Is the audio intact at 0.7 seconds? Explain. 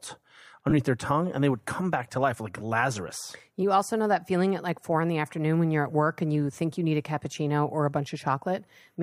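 No. From 0.69 to 0.73 s, just before "their tongue and they", there are lost LE Audio frames: about 22.5 ms, consistent with three 7.5 ms frames. The decoder fills the gap by repeating the last spectrum with randomised signs, so the sound becomes a brief noisy smear.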